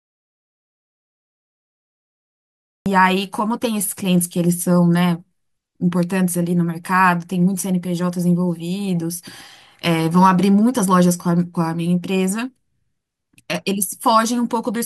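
A speech clip with an audio dropout to silence from the start until 2.86 s, likely a lost input: dead silence, not quiet room tone or a fade, then speech cuts in abruptly.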